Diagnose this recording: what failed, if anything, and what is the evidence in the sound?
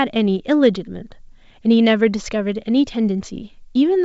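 Nothing failed: the speech carries the wideband reach up to about 7 kHz expected of a G.722 wideband telephone coding path, which fits the full 64 kbit/s mode, with at most a faint upper-band hiss from the codec.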